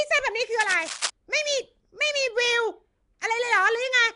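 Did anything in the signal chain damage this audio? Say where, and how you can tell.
Yes. Nellymoser compression runs through the whole clip and is likely the cause of its damage at the codec stage. The speech carries a rough, hissy halo and a smeared, underwater quality, and nothing is left above 10.6 kHz. The codec works on short fixed blocks with a very small, fixed bit budget. Weak bands lose their bits entirely and get refilled with noise, which makes the grainy haze. The quality points to a rate of around 44 kbps.

Cable scratch noise from 0.61 to 1.10 s points to the analogue wiring stage. For about half a second, dense, uneven bursts of scratching and rustling sit over the speech at nearly its own level. A worn cable, connector or control being moved is the likely cause. The moving contact changes its resistance rapidly, and that unstable contact injects irregular noise into the signal until the movement stops.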